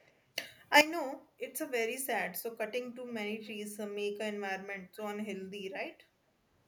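From 0.00 to 0.24 s a faint delayed copy of the speech trails underneath, an echo leak, most likely from a far end on loudspeaker whose echo canceller let some of its microphone pickup through. The copy lags by about 462 ms and sits far below the direct speech. On a spectrogram it shows as weak repeated harmonic patterns offset in time from the originals.

From 0.36 to 0.81 s the level leaps up by about 12 dB with no ramp, a sudden gain jump, likely from a digital gain step applied between one sample and the next. Speech and background noise get louder together, and the instant of the change can carry a click. The waveform envelope steps abruptly taller at 0.36 s and drops back at 0.81 s, and the spectrogram brightens across all frequencies at once, noise floor included.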